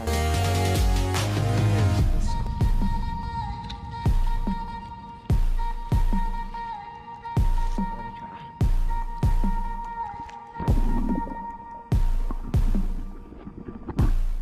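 Nothing stood out as a technical fault anywhere in the recording on listening.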